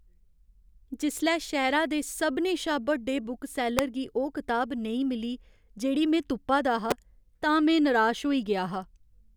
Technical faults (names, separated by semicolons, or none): electrical switching spike